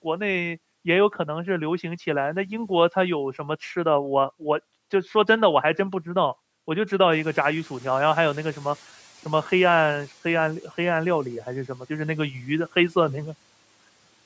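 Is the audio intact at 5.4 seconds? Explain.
Yes, at 5.4 seconds the audio is intact, with no fault to be heard at that moment.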